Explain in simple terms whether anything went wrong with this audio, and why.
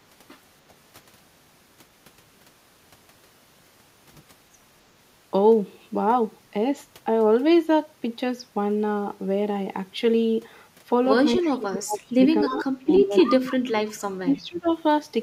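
Yes, three things went wrong, all tied to the echo canceller, the part of a call system that keeps loudspeaker sound from being sent back down the line.

Background gated by the echo canceller: Near the start, while the loudspeaker was playing, the echo canceller turned the microphone down sharply to block any echo. That took the room's background sound with it. From 0.62 to 0.72 s the quiet room noise briefly dips, then comes back once the canceller relaxes.

Speech suppressed in double talk: Three times, both sides were most likely talking at once, and the echo canceller couldn't tell the local talker apart from the loudspeaker's echo, so it turned everything down. The speech sharply dips or partly vanishes from 11.41 to 12.01 s, from 12.29 to 13.83 s, and more mildly from 14.22 to 14.69 s, returning when the overlap ends.

Echo leak: In those same overlapping moments, the echo canceller on a speakerphone end likely failed to remove all of what its microphone picked up, so some of it was sent back. 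A delayed copy of the speech, trailing by about 0.3 seconds, can be heard at 11.42 to 11.48 s and 14.55 to 14.72 s as faint scraps. At 12.43 to 12.64 s and 12.96 to 13.35 s it is more noticeable.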